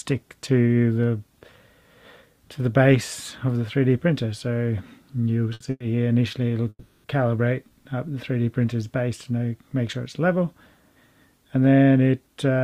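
At 5.53 to 5.62 s comes a short stall from a late packet. The jitter buffer ran dry, so the last sound is held about 70 ms, then resumes unbroken.

From 5.70 to 5.84 s is a call audio freeze. The sound hangs as a fading buzz for 100 ms, ending in 30 ms of silence, likely from packets held up in transit. A longer one follows at 6.69 to 7.06 s, stretching 350 ms before going quiet for 50 ms. Both times the audio picks up where it stopped.

From 11.70 to 12.60 s a jitter buffer speed-up trims tiny pitch-period slices, roughly a tenth of a second in total. The sound runs about 9% fast at unchanged pitch and feels hurried.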